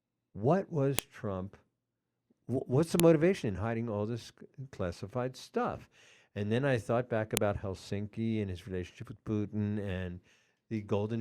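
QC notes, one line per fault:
0.99 s, 3.00 s, 7.37 s: file header played as audio. Each event is a single sharp, loud click lasting a millisecond or less, landing abruptly regardless of what the speech is doing at that moment. The pattern points to separate WAV segments joined end to end with their headers left in place, so a few dozen bytes of header data are decoded as sample values and reproduced as an impulsive snap at every segment boundary.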